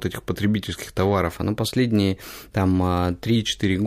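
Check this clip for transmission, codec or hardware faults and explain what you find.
One fault stands out, a drift correction step running from 1.30 s to 3.36 s, right after "этих потребительских". The speech suddenly plays 6.25% faster and rises by 105 cents, a little over a semitone, then snaps back to normal speed and pitch. This is likely a clock-matching stage abruptly changing its playback rate to drain or refill its buffer. On a spectrogram, the harmonics jump upward as a block for those two seconds, and the waveform's syllables look slightly compressed in time.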